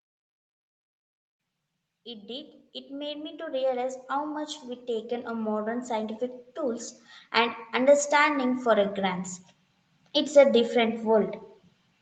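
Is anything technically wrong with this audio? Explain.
Yes. Automatic gain rising from 2.04 to 9.27 s: gain control, judging the input quiet, lifts it about 14 dB, so the waveform envelope and spectrogram noise floor swell together.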